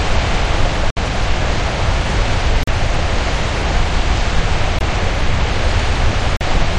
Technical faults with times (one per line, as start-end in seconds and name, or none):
0.90-0.98 corrupt frame muted
2.63-2.69 corrupt frame muted
4.79-4.83 corrupt frame muted
6.37-6.42 corrupt frame muted